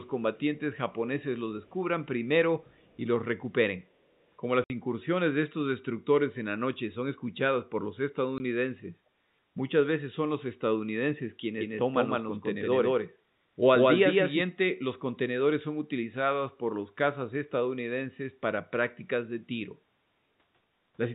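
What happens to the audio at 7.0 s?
Nothing goes wrong at 7.0 s: the speech carries on intact through that moment, still with the narrow, telephone-band sound of G.711 coding, which holds everything below 4 kHz.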